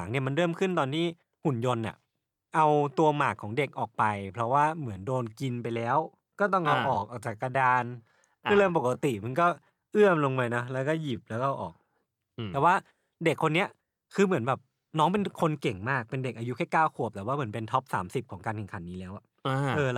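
From 4.00 s to 11.26 s the speech abruptly slows to about 0.74 times its pace while the pitch holds steady, sounding dragging. This time-stretched section was likely software lengthening the audio by repeating short pieces to fill a longer slot.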